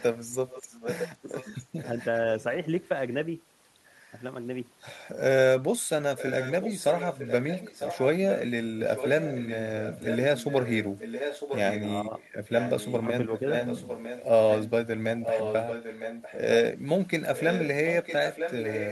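A speech recording with a delayed copy of the talker returning about 0.96 s late. This echo leak is present from 0.0 to 2.04 s, 5.8 to 11.87 s and 17.35 s to the end, roughly 10 dB below the direct speech, and stronger, around 5 dB below, from 12.48 to 16.38 s. The likely cause is a loudspeaker-side echo canceller failing to remove its microphone pickup before sending it back. At 1.21 to 1.3 s, while that echo overlaps the speech, the talker dips by around 10 dB for roughly a tenth of a second. This is speech suppressed in double talk: the canceller likely cannot separate near-end voice from the returning echo and attenuates both.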